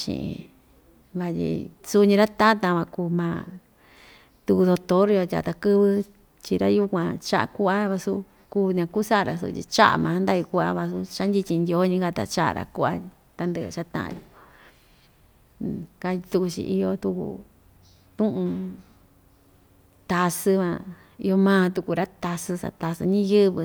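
Speech with no audible faults.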